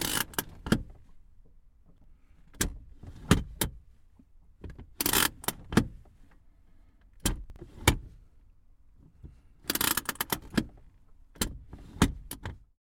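At 1.86 to 2.04 s the audio briefly jumbles, and again at 7.44 to 7.56 s. Both are chunks out of order. In 60 ms blocks, the first spot has one chunk arriving two chunks late, so it plays after the two that should follow it. The second has a chunk one place late. Nothing is missing, but each swap leaves hard joins.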